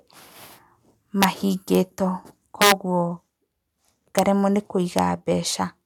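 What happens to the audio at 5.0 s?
At 4.99 s a loud speech peak hits integer overflow: instead of clipping flat, it wraps to the opposite sign, giving a violent crack far sharper than clipping.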